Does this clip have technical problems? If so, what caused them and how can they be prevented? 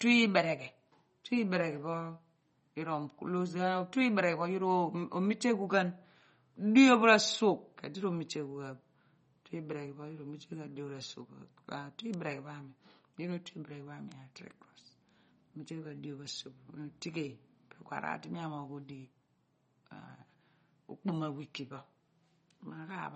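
Yes. Throughout the speech, plainly audible MP3 compression is the likely cause of the watery, swirling texture. Starved for bits, the encoder drops weak frequency lines that flicker frame to frame, and it removes everything above 8.2 kHz, which fits a bitrate around 32 kbps. A spectrogram would show a hard ceiling at 8.2 kHz and patchy, blinking high bands. To prevent it, encode at a higher bitrate or keep a lossless master.

Bit error spikes occur at 12.14 s and 14.12 s. A flipped bit makes the sample value jump by a power of two and snap straight back, heard as a sharp tick. The first involves a single sample and the second spans a few in a row. On a waveform each appears as a thin vertical needle, and on a spectrogram as a narrow broadband stripe. Using checksummed links and error-correcting memory prevents such corruption.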